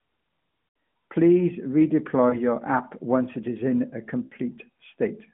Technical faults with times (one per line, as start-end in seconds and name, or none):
0.72-0.74 lost AMR speech frames
2.30-2.42 lost AMR speech frames
4.26-4.34 lost AMR speech frames